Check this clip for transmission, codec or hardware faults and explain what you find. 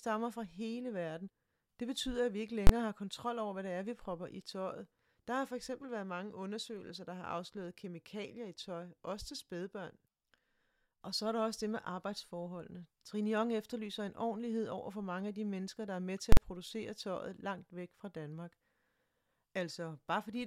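There's one fault type here, showing up twice: invalid numbers at full scale. At 2.67 to 2.69 s and 16.32 to 16.37 s, a calculation blew up into infinite or invalid values that got pinned at maximum. Each spans a block of about 23 ms and 46 ms, which fits 1024- and 2048-sample blocks, so each lands as a sharp, very loud bang cutting through the speech.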